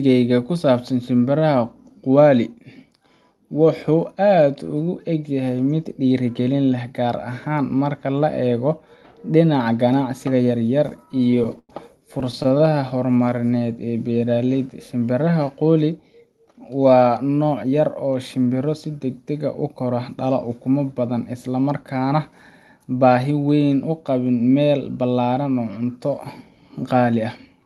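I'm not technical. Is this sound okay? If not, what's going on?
No. Repeated stalls (stutter) at 10.86–11.70 s, just after "ganacsiga yaryar", and again at 12.13–12.72 s: the audio arrived late, so the playback stretched the last sound to bridge each wait. Nothing is lost, but the speech drags and stutters.

Jitter buffer slow-down at 13.00–14.26 s: to rebuild its reserve, the playback repeated tiny slices of the sound. The speech runs at about 87% speed with the same pitch.

Jitter buffer speed-up at 16.20–17.73 s: with too much audio waiting, the playback dropped tiny slices, roughly 0.15 s in total. The speech runs about 10% fast with the same pitch and sounds hurried.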